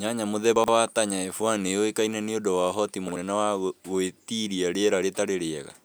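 At 0.56 to 0.68 s and again at 3.08 to 3.16 s (between "yuĩkaine niũndu wa ũhoti" and "wa gũĩtiria"), chunks out of order: a 40 ms chunk plays two, then one, chunks late, giving a brief jumbled stutter. Unlike a dropout, nothing goes missing, and unlike a repeat, nothing plays twice.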